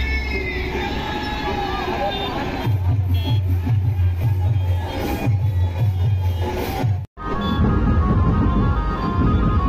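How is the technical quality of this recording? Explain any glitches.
No technical faults can be heard in the recording. There are no glitches to explain.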